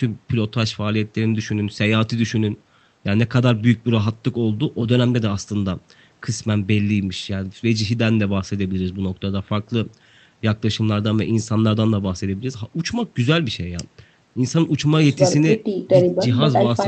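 No faults found in the speech, which carries the call codec's ordinary coding noise and a top end that stops at about 8 kHz, consistent with a wideband voice setting.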